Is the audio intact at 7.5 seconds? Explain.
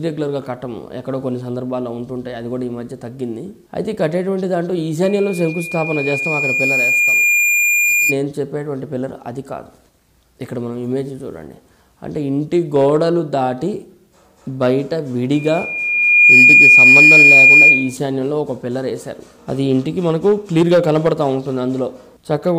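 No. At 7.5 seconds the clip is inside a loudspeaker feedback squeal running from 5.03 to 8.17 s. The microphone picks up its own loudspeaker, and loop gain exceeds unity at 2.4 kHz, so that tone swells over about two seconds into a squeal about 5 dB above the rest of the sound.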